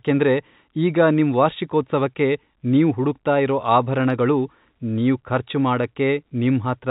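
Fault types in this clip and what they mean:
No faults found; the speech carries the band-limited sound of telephone coding and nothing else.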